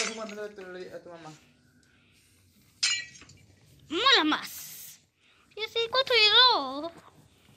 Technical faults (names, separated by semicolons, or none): DAB burbling